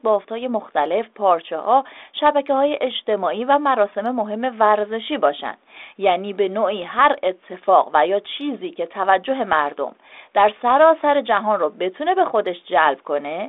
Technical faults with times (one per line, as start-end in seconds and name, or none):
none